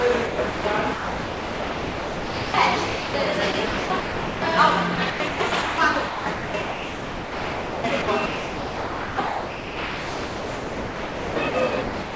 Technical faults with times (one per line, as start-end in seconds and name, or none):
0.26-0.64 sound chopped by the voice detector
0.94-2.54 sound dropped by the voice detector
2.86-3.14 sound dropped by the voice detector
3.52-4.42 sound chopped by the voice detector
4.96-11.54 sound chopped by the voice detector
11.82-12.16 sound dropped by the voice detector